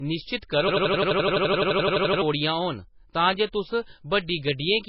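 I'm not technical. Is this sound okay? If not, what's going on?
No. From 0.68 to 2.22 s the speech sticks and stutters like a machine gun, one 85 ms scrap repeating about 12 times a second. This is a system hang loop: the computer froze while the sound hardware replayed its last bit of audio, so about one and a half seconds of speech is lost.

Throughout, the speech sounds dull and muffled, with nothing above 5.5 kHz. The likely cause is low-bitrate audio saved at a high bitrate: a heavily squeezed MP3 was later resaved at higher quality, which cannot bring back the detail that was already gone.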